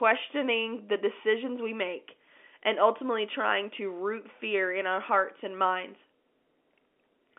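Nothing goes wrong anywhere in this speech, which simply carries the familiar narrow sound of a G.711 A-law telephone line, its band reaching from about 250 Hz up to 3.5 kHz.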